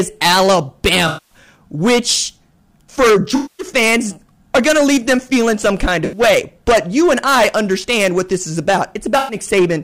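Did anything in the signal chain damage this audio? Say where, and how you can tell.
Yes. Hard clipping at a gain or converter stage runs throughout: peaks are driven about 16 dB over, flattening around a tenth of samples into constant harsh fuzz, not intermittent dropout crackle.

AAC frame loss with concealment, a codec or network fault, appears at 1.07–1.38 s before "which for", 3.35–3.67 s after "which for", 6.04–6.20 s after "them feeling some kind", and 9.18–9.36 s. The decoder smears the last spectrum into phasey noise rather than leaving clean silent gaps.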